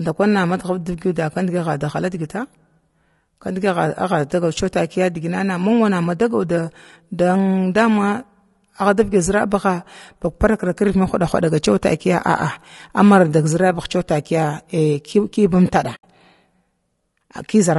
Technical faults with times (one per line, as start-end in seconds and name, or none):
0.00-17.79 low-delay AAC compression
15.95-16.04 AAC frame loss with muting